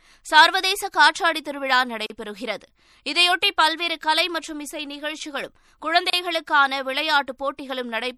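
The speech has been squeezed through a lossy encoder, likely MP3 at a low bitrate (plainly audible damage that fits something near 64 kbps), so weak detail flickers in and out, leaving s sounds watery and swirly and consonant attacks smeared. Separately encoded pieces were joined without trimming the encoder's start delay and end padding, so a gap at a join of encoded pieces opens roughly every 4 s: a gap of about 37 ms from 2.06 to 2.10 s and 32 ms from 6.10 to 6.13 s, each with smeared edges before the speech resumes where it stopped.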